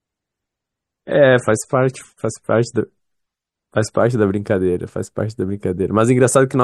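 For the first 4.0 s the speech is dull and swirly, which fits a 32 kbit/s MP3: an adaptive stream starting at a low bitrate, then jumping cleanly to around 128 kbit/s.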